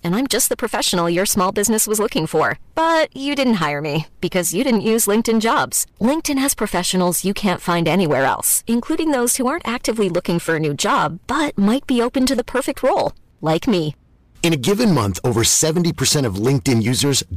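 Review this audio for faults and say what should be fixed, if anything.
Hard clipping throughout: the speech is driven about 11 dB past full scale, so roughly 7 percent of samples are flattened, producing harsh fuzz on louder syllables. To prevent this, reduce input gain or add a limiter before conversion so peaks stay below 0 dBFS.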